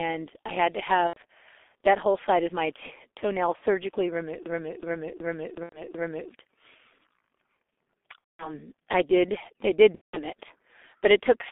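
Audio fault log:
throughout, G.723.1 codec: The speech sounds muffled and hoarse, confined to a telephone band of about 250 Hz to 3.5 kHz, with smeared consonants and a rough, grainy texture. The heavy damage points to G.723.1's 6.3 kbit/s mode, whose 30 ms frames and slow-updating voice model can't follow quick changes in the voice. Unlike a plain low-pass filter or narrowband line, the timbre itself is coarsened, not just dulled.
1.08–1.20 s, 3.56–3.64 s, 5.64–5.82 s, 8.18–8.58 s, 9.95–10.22 s, VoIP packet loss concealed by the speech codec: Each gap is filled with a stretched continuation of the preceding sound that fades, going silent from the third lost frame in a row wherever three or more frames were lost. The first comes right after "I had to". The longest, leading into "I did", fits about seven lost 30 ms frames. The one before "it but it took" fits about six. The decoder repeats its last pitch and filter with falling gain, so speech stays weak and distorted briefly after each gap. 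A plain dropout would be a hard silence or click instead.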